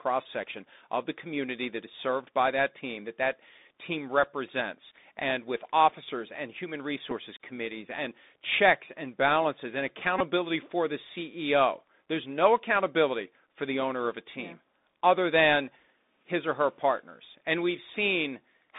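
A Bluetooth headset link carries this speech through the CVSD codec, which fits a 64 kbps stream. Its one-bit delta coding cannot keep up with loud, sharp sounds, so s sounds turn scratchy and a granular hiss runs underneath, with everything confined to roughly 200 Hz to 3.7 kHz. The headset also drops voice packets and repeats the previous packet's data. Single repeats at 4.23 s and 7.11 s give small ticks. A longer run from 10.19 to 10.21 s, suggesting about five repeats, makes a brief buzz near 267 Hz.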